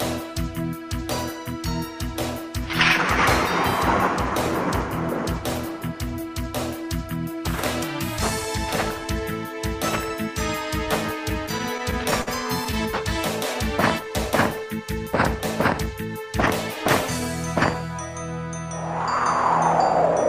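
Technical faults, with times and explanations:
11.29–12.29 s, repeated stalls (stutter): the jitter buffer kept running dry, so the last sound was held over ten times, up to 51 ms each. Nothing is lost, but it drags.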